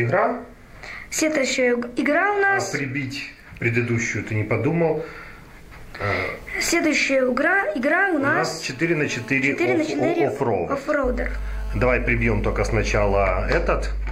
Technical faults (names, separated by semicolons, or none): mains hum